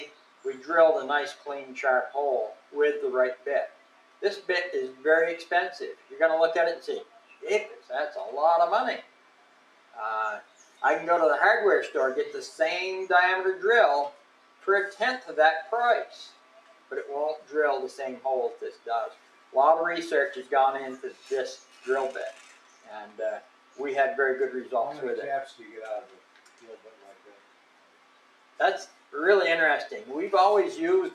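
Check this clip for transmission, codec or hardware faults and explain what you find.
The main problem here is processing: a speech-style noise suppressor sits on this audio the whole way through.

Noise suppressor applied to music or sounds: for the full clip, the suppressor keeps misreading sustained, steady parts of the sound as background noise and pulling them down, with the gain swinging by around 10 dB. Onsets mostly slip past it, but held parts and tails get squeezed, so the audio pumps and flutters and loses its body and ambience.

Sound cut by the noise suppressor: there are four stretches where it bites hardest, at 0.05 to 10.83 s, 14.11 to 19.54 s, 21.13 to 23.79 s and 25.5 to 29.14 s. In each, steady or decaying material sinks by as much as about 11 dB. Decays are cut short while sharp transients come through. The ducking isn't continuous; it adds up to roughly four seconds in the first stretch, a couple of seconds in the second, about a second and a half in the third and around three in the last.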